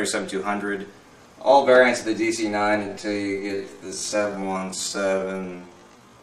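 From 2.81 s to the end, a time-stretched section slows the audio to about 0.56 times its original speed while pitch stays unchanged. The pace drops abruptly and the sound drags, likely from software repeating short segments to lengthen it.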